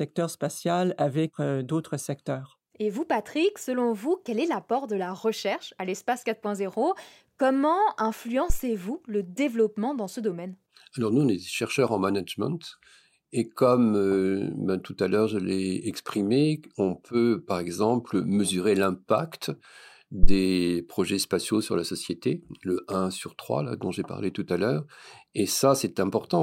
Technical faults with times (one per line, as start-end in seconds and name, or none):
8.50-8.60 phantom power thump
20.23-20.35 phantom power thump